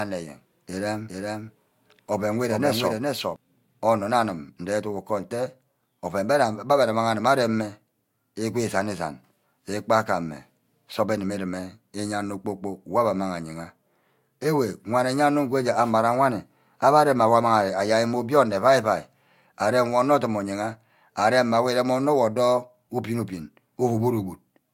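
Speech opens with a doubled audio track already under way. A dry, full-band copy trails around 400 ms behind, somewhat quieter, then cuts off abruptly at 3.36 s, just before "onor nne". It is likely a second, slower capture path or an edit holding two offset copies.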